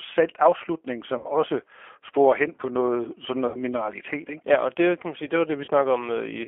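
G.729 codec coding runs through the whole clip: the speech is squeezed into a 250 Hz to 3.4 kHz telephone band and rebuilt from a vocal-tract filter, pitch predictor and a few pulses per frame, giving a plainly rough, synthetic quality that fits an 8 kbit/s G.729A stream. VoIP packet loss concealed by the speech codec then appears at 1.18 to 1.27 s and 3.48 to 3.59 s (about 60 ms missing each) and at 5.65 to 5.71 s (about 30 ms). The decoder extends the last pitch and filter with falling gain, so each gap becomes a fading buzzy tone or coloured noise, and the voice stays weak briefly afterwards.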